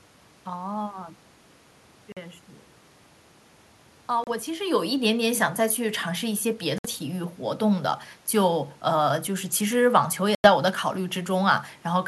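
A speech clip with four short silent holes, at 2.12 to 2.18 s, 4.24 to 4.29 s, 6.78 to 6.86 s and 10.35 to 10.48 s, lasting about 46, 30, 61 and 91 ms. These are likely Bluetooth dropouts, where packets miss the headphones. The speech picks up further on, as though it kept playing through each gap, unlike a buffer stall, which resumes exactly where it stopped. The room noise vanishes along with the speech, and the level change near 4.5 s is the talker moving.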